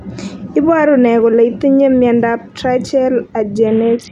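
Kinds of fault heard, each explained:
Bluetooth SBC bit pool drop: From 3.67 s to the end of the clip, the speech turns dull and gritty. The top sub-bands get few or no bits, and the rest are coarsely quantised. This fits a bit pool falling from 28 to 5, near 54 kbps.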